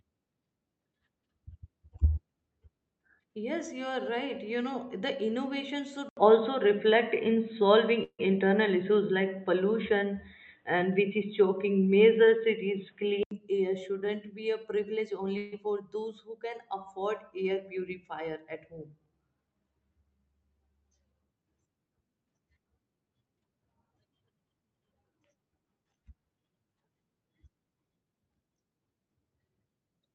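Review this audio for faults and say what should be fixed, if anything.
The input most likely switched to a poorer device from 6.09 to 13.31 s, just after "innovation should". An 80 ms silence marks the change. The speech then turns dull and boxy, with nothing above 3.9 kHz, a level shift of about 5 dB and a new noise floor about 45 dB down, until it clears before "air shouldn't be a".

A call audio freeze, likely from packets held up in transit while the jitter buffer ran dry, occurs at 8.03 to 8.21 s and again at 15.37 to 15.54 s, before "for those who can". The receiver stretched the last sound into a fading buzz for about 150 ms each time. The first freeze falls to 60 ms of silence. Nothing is lost, but a gap is inserted.

A short stall from a late packet at 12.25 to 12.29 s left the jitter buffer briefly empty, so the last sound is held for an extra 22 ms before the speech resumes where it stopped.

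A jitter buffer speed-up from 17.5 to 19.22 s happened because too much audio had accumulated, so the receiver cut short pitch-period slices, about a tenth of a second in total. The speech runs at 106% speed at unchanged pitch and sounds hurried. This came through the normal Opus call path, which limits the audio to its usual band.

To prevent these faults, lock the recording to the intended microphone and disable automatic device or headset-profile switching, and stabilise the network path so packets arrive evenly and the jitter buffer neither starves nor overfills.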